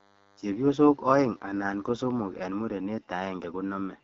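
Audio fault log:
throughout: AMR wideband (HD Voice) codec. The speech has that rough, raspy edge you get when AMR-WB runs at one of its bottom rates, and the damage is easy to hear. It sounds consistent with the 8.85 kbit/s mode. Below 6.4 kHz the codec is rebuilding the voice from a pulse-excited vocal tract model, and at this rate there aren't enough bits to do that cleanly. The band from 6.4 up to 7 kHz is filled with shaped noise, and nothing at all comes through above 7 kHz.
0 to 2.43 s: DECT cordless phone buzz. For the first couple of seconds a thin, steady buzz sits under the speech at 100 Hz, with a whole stack of harmonics above it. It's fairly quiet, roughly 35 dB below the speech. A DECT handset or base station fires a short radio burst every 10 ms. Something in the audio chain rectifies those bursts, and each one turns into a click. The clicks repeat 100 times a second and blur together into a buzz.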